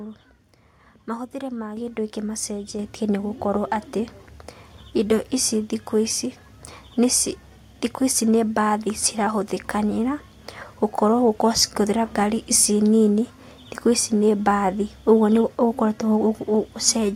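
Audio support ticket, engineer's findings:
Microphone volume stepped up twice: 1.77 s, about 6 dB, before "kĩndũ gĩkĩ"; 2.79 s, about 4 dB, before "nĩ gũkorwo". Speech and background jump together. Call software raising mic input gain.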